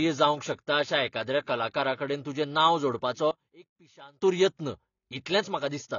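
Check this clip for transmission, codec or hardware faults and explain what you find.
Two faults are audible: codec damage across the whole clip, and a sudden loss of level for just under a second.

AAC compression (throughout): The speech sounds dull and band-limited, with nothing above 7 kHz and plainly audible coding artefacts. The likely cause is AAC-LC encoding at a low bitrate, which fits roughly 24 kbps. At rates that low the encoder lowers its cut-off and quantises the remaining frequency lines coarsely, which strips the top of the spectrum and roughens what is left.

One channel inverted (3.31 to 4.22 s): Right after "कलाकाराकडेन तुजें नांव जोडपाचो", the level drops by about 24 dB and stays down until 4.22 s. This is likely one channel of a stereo feed with reversed polarity during that stretch. When the two channels are summed to mono, the content they share cancels and only the small difference between them survives, which explains the drop.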